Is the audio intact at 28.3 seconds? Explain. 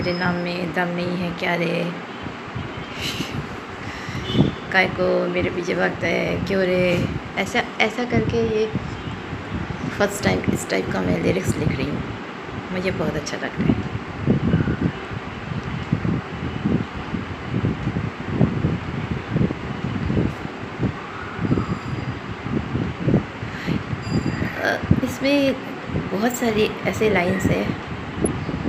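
No. From 28.26 to 28.30 s a corrupt frame is decoded: flipped bits in a couple of compressed frames are played anyway, putting energy at wrong frequencies. It sounds like a short blip of noise peaking around -15 dBFS, seen as a brief vertical smear on a spectrogram.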